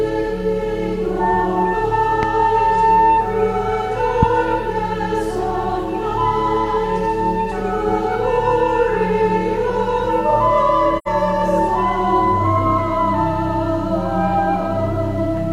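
At 2.23 to 2.25 s and again at 4.23 to 4.25 s, a single sharp loud pop jumps out at roughly 15 dB above the surrounding level, with the sound continuing underneath. Each is likely a brief voltage pulse, such as a switch transient or static discharge, added to the signal.

From 10.98 to 11.08 s the sound fades briefly to silence and back, an AAC frame loss with muting. The soft-edged gap of about 85 ms fits two lost frames whose spectrum the decoder zeroed, with overlapping windows smoothing the edges.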